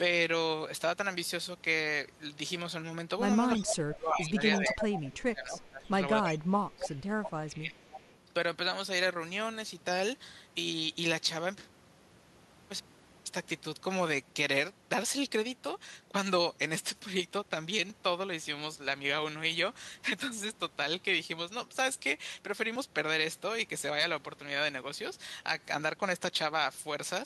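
From 3.33 s to 22.76 s, a regular click recurs every 4.86 s, about five times. These are clock drift buffer slips, likely from two clocks disagreeing by roughly 200 ppm, each dropping or repeating a few dozen samples.

At 3.55–3.73 s, 4.53–5.00 s, 5.59–5.87 s, 6.23–6.30 s, 6.79–7.34 s and 7.79–8.16 s, a copy of the speech returns 327 ms late, between about 5 dB and about 30 dB below it. This is echo leak, likely loudspeaker pickup that the far-end canceller failed to remove.

Overlapping this, from 3.58 s to 7.79 s, the speech dips and cuts out in pieces, by up to about 25 dB and for roughly 3 s in total. This is speech suppressed in double talk, likely the canceller turning down its own talker along with the loudspeaker echo when both spoke at once.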